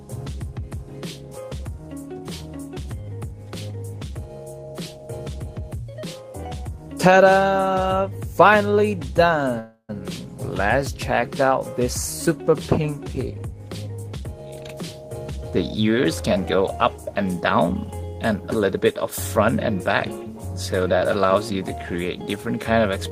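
From 9.59 to 9.91 s a call audio freeze stretches the last sound into a fading buzz or hiss, then about 60 ms of silence. It was likely caused by delayed packets emptying the jitter buffer. The spectrogram shows smeared horizontal bands, then a blank gap. Nothing is lost; everything after runs 294 ms late.

From 13.30 to 14.69 s a jitter buffer speed-up plays the audio at 119% speed with unchanged pitch, so it sounds hurried. The receiver trimmed about 0.3 s of excess buffered delay in short pitch-period cuts, which shows as whole waveform cycles removed while the remaining cycles keep their length.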